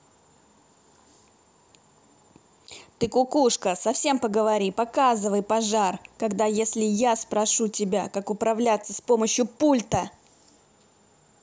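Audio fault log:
4.70–7.56 s video or display buzz: faint 59.94 Hz buzz with hash, roughly 40 dB under the speech, as video field-rate interference leaks into the audio.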